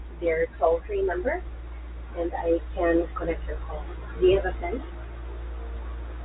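Speech carried over G.711 telephone coding, band-limited to roughly 3.9 kHz as that path requires; no faults found.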